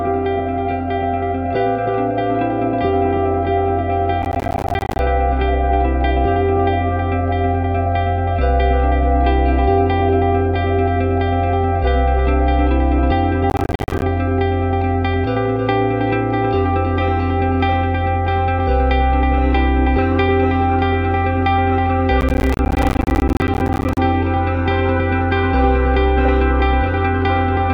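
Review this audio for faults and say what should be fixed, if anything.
Processor overload crackle shows up three times: 4.22 to 4.99 s, 13.5 to 14.02 s, and 22.21 to 23.98 s. The processor keeps missing buffer deadlines, each miss dropping a short silent gap (around 10 ms each), so the audio tears gritty. Give it more headroom with larger buffers or lighter processing.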